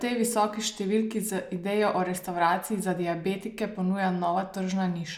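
Nothing in this speech clip stands out as a technical fault; it runs along without a single glitch worth pointing to.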